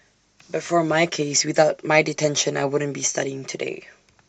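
Throughout the speech, the sound is dull and muffled, with a gurgling, granular roughness as upper frequencies flicker in and out. This is likely MP2 compression, with too few bits to keep the higher sub-bands running. The damage is plainly audible and points to a bitrate around 80 kbps.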